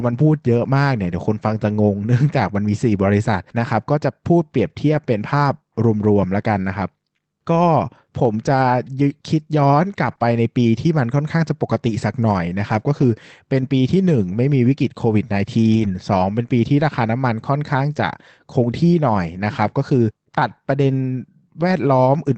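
Packets were lost but rebuilt from error correction, with the following packet's low-bitrate copy filling each hole, at 2.27–2.29, 4.93–4.99, 10.07–10.13, 10.19–10.21, 13.01–13.03, 15.71–15.89 and 16.79–16.81 s. There are no gaps, but those stretches turn briefly rougher and noisier. The 100 ms patch at 15.71 s, which fits about five lost packets, is the longest.

A short concealed packet loss occurs at 10.15–10.19 s, between two rebuilt spans. About 20 ms never arrived in time, so the receiver extended the preceding sound to cover it before blending back. The result is a brief smear or wobble between two already degraded patches.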